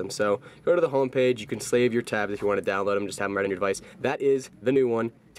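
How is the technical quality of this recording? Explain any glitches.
The recording has one clear glitch, a time-stretched section at the end. From 3.17 s to the close at 5.38 s, the pace suddenly jumps to about 1.35 times normal speed. The pitch does not rise with it. This is likely the work of software squeezing the audio to fit a shorter length. It keeps the pitch by dropping short slices of the waveform. Those missing slices make the final stretch sound rushed.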